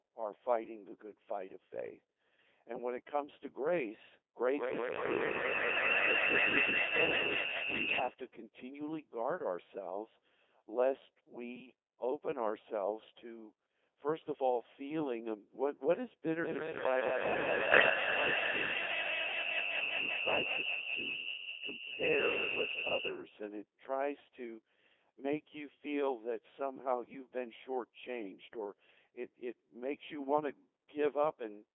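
Throughout, the speech carries heavy Codec 2 vocoder damage: a sine-synthesised, buzzy, robotic voice confined to 300 Hz to 3.5 kHz, which fits a 2.4 kbit/s mode rather than a waveform codec. From 7.88 to 8.00 s and from 17.72 to 17.90 s, bit errors on digital voice radio cause the voice to lurch in pitch, level and tone into warbling gibberish instead of dropping out to silence.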